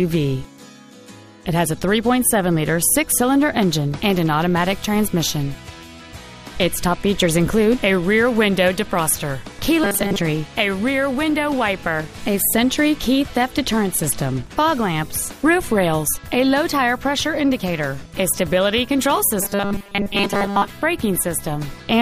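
A rigid, metallic 200 Hz buzz at 9.84–10.19 s and 19.41–20.70 s is robotic sound from repeated short buffers, likely a looped 5 ms chunk replacing most real audio.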